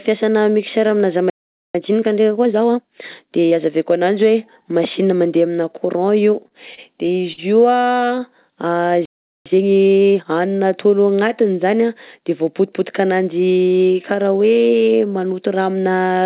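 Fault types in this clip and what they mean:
playback stall: The speech cuts to silence for about 0.45 s at 1.30 s, right after "fiasana mixeur amina", and again for about 0.40 s at 9.05 s. The likely cause is that the player ran out of data or its thread was blocked. Unlike the stutter, each stall is a single unbroken silence with nothing filled in, and the speech resumes exactly where it stopped.
time-compressed catch-up: Right after each stall the player works off its backlog by cutting and cross-fading small slices. From 1.75 to 3.53 s, up to "azaveko ananjy", the speech runs 1.25 times fast. From 9.46 to 10.26 s it runs 1.5 times fast. The pitch stays normal. That is what separates this from plain sped-up playback, which would raise the pitch along with the pace.
repeated stalls (stutter): After "mandeha amina courant io", from 6.48 to 7.40 s, the buffer runs dry seven times, with gaps of up to 50 ms. 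The receiver bridges them by extending the last sound, about 136 ms in total. Four shorter gaps follow from 7.82 to 8.23 s, none longer than 16 ms. Nothing is lost, but the speech drags and hiccups. Unlike a stall, this is many brief concealed gaps rather than one silence.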